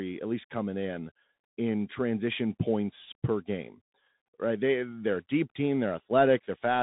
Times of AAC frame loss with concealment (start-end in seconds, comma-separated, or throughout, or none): none